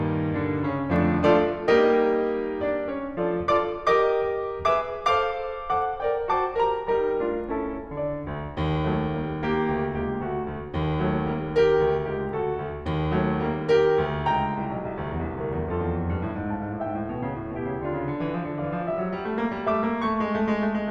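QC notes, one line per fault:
No technical faults are present in the music; the signal path holds steady throughout, with nothing in it that calls for a note.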